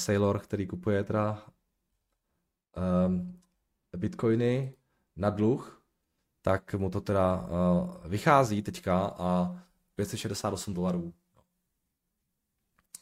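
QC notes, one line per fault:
No faults were heard in this speech recording. Nothing needs a time marked against it.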